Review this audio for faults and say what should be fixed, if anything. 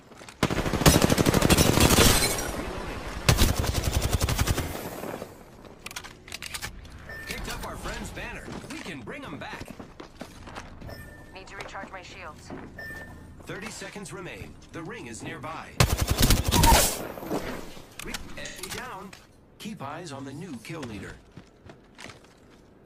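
A block of digital silence at 1.87 s lasts about 5 ms, a tick where output briefly cut out, consistent with a 256-sample buffer underrun. The waveform shows a flat-line gap with abrupt edges.

AAC frame loss with concealment occurs at 4.62–4.74 s (85 ms) and 18.45–18.65 s (128 ms). The decoder filled each gap from the last good spectrum, consistent with two and then three lost frames. Both patches sound smeared, noisy or phasey, and on a spectrogram they appear as blurred, texture-less bands.

To prevent these, enlarge or prioritise the audio output buffer, and carry the AAC stream over a more reliable transport with error correction or retransmission.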